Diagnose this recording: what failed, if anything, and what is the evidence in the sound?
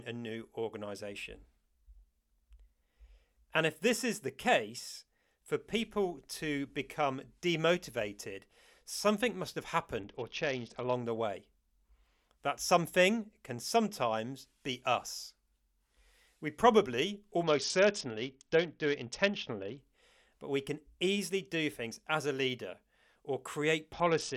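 The failure is in the codec stage, as a Bluetooth SBC bit pool drop. From 10.00 to 10.93 s, 17.43 to 19.78 s, and 23.93 s to the end, the speech turns dull and gritty. The loss points to a bit pool of about 7 instead of 28, leaving the upper sub-bands starved and the rest coarsely quantised.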